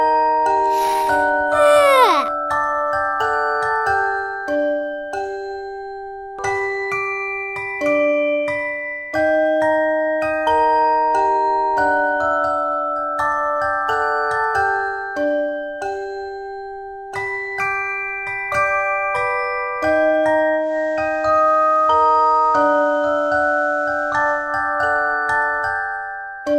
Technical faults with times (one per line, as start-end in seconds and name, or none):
20.55-24.55 digital radio blending to analogue